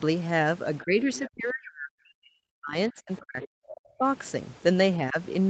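Speech recorded over a call, where an echo canceller likely misjudged double talk: with both sides active it clamped the talker along with the echo, so from 0.83 to 4.04 s the voice repeatedly sinks or cuts out, at worst by roughly 40 dB, with a brief 10 dB dip again at 5.09 to 5.17 s. Incomplete echo cancellation likely lets the other side's voice leak through in short, faint scraps well below the talker, at 1.14 to 1.30 s, 3.42 to 3.48 s and 3.68 to 3.76 s.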